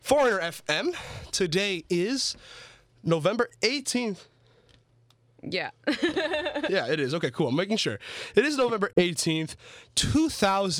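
At 8.93 s the speech cuts to silence until 9.03 s, then resumes as if it had played on: likely a Bluetooth dropout, with a couple of packets arriving too late.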